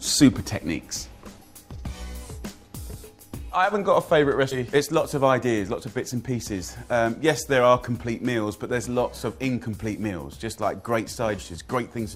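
At 4.51 to 4.56 s and again at 11.37 s, compressed frames are skipped: whole blocks of coded audio never reach the output, so the sound jumps ahead, by roughly 150 ms the first time and roughly 100 ms the second, consistent with several 20 ms frames. A waveform shows an abrupt change in envelope, and a spectrogram shows a vertical seam where the texture shifts.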